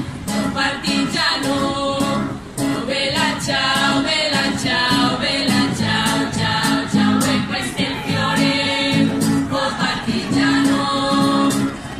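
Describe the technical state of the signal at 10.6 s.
A galloping dit-dit-dit of short buzzes sits over the audio at 10.6 s, around 15 dB below the main signal. These are GSM signalling bursts, running from 9.09 s to 11.94 s. A nearby 2G phone is exchanging short groups of radio bursts with the network, as it does before a call or message, and the audio circuit rectifies that RF into the 217 Hz burst rhythm heard here.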